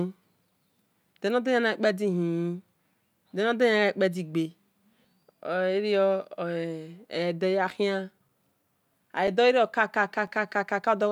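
From 8.29 s to 10.28 s the speech carries a short run of regular ticks, about three of them, spaced exactly 1.0 s apart. Each is a tiny hole of a few milliseconds where the signal drops to silence and snaps back, so it registers as a click against the speech. These are periodic USB or driver dropouts: something blocking the audio path once a second, so a brief slice of samples never arrives and is replaced by silence.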